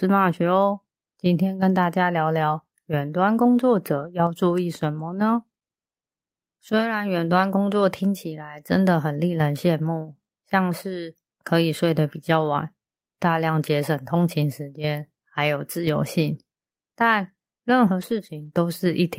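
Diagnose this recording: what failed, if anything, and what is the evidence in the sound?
Network stage: lost packets rebuilt from error correction at 3.95–4.09, 10.93–10.95, 15.81–15.87 and 18.01–18.47 s. No gaps; the speech turns briefly rougher and noisier, which fits a low-bitrate redundant copy carried in the next packet. A spectrogram shows smeared, noisier patches with continuous waveform.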